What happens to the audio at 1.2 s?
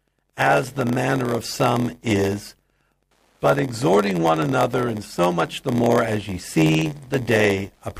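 Wi-Fi interference is present at 1.2 s and runs through the whole clip. A nearby Wi-Fi radio's beacon, repeating every 102.4 ms, is rectified by the audio circuit, producing steady ticking about ten times a second, roughly 50 dB below the speech.

Block size mismatch (padded) is also present at 1.2 s and throughout. One stage writes shorter blocks than the next reads, and the remainder of each block is filled with zeros. This inserts a gap every block, heard as an 86.1 Hz buzz, which fits a 512-sample read block. The speech plays at 0.938 times normal speed.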